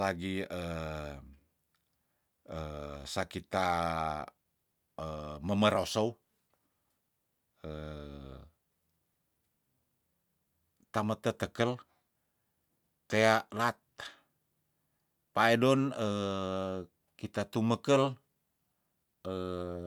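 No technical faults detected.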